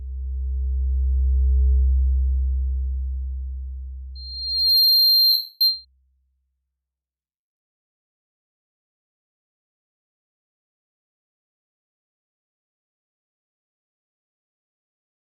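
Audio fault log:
4.15 to 5.85 s, loudspeaker feedback squeal: A steady tone near 4.2 kHz creeps in and swells over roughly the first 0.7 s until it sits around 5 dB above the rest of the sound, then holds until it drops out at 5.85 s. The mic is hearing its own loudspeaker, and at that one pitch the loop gain tops one, so each pass round the loop makes the tone a little louder until something caps it.
5.31 to 5.61 s, lost LE Audio frames: For about 0.29 s the Bluetooth link drops out right in the middle of the squeal, which fits a run of around 39 LC3 frames going missing. The decoder papers over the gap by replaying the last spectrum it had with scrambled phase, so the clean 4.2 kHz whistle turns into a hissy smear that sags in level over the gap before real audio comes back at 5.61 s.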